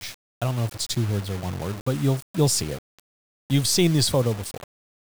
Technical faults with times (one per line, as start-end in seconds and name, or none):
0.00-5.16 low bit depth without dither